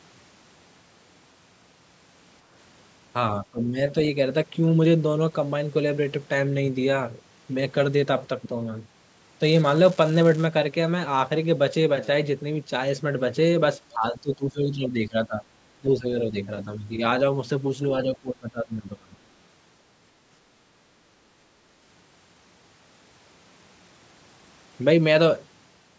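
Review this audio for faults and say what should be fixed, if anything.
Speech suppressed in double talk likely came from the echo canceller failing to tell the near talker apart from loudspeaker echo while both sides spoke, so it attenuated everything together. The speech sinks at 3.4 to 3.77 s by about 20 dB, from 13.94 to 15.49 s and 15.79 to 16.05 s by about 15 dB, at 16.65 to 17.01 s only slightly, by about 5 dB, and from 18.04 to 19.14 s by about 25 dB. These are the deepest gaps, and they make the talker fade or break up in pieces. Better double-talk detection, which keeps the near-end path open whenever local speech is present, would prevent this.

An unreliable data bit, meaning one marginal data line in the digital path, flips the same bit in a random share of samples from 9.42 to 10.46 s. Every wrong sample becomes a spike of identical height. The result is a continuous crackle or fizz laid over the audio, and because it does not depend on the signal, it carries straight through any pause within that second. 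Reseating or replacing the faulty connection or converter, and checking signal integrity on that line, would prevent it.

Background gated by the echo canceller happens when the canceller clamps the microphone down hard while the loudspeaker is playing. From 20.66 to 21.1 s the room sound dips by about 6 dB for roughly 0.4 s and then comes back as the canceller releases. Gentler suppression with comfort noise filling in during loudspeaker playback would prevent it.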